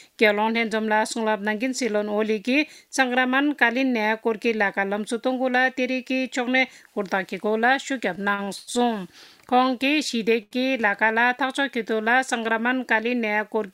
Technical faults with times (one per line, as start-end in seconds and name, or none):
8.15-8.69 repeated stalls (stutter)
10.43-10.53 short stall from a late packet